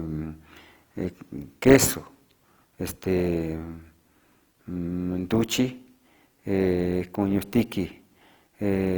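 Throughout, the speech turns grainy and rough as starved bands are noise-filled, likely Opus compression near 24 kbps; bandwidth still reaches 20.2 kHz.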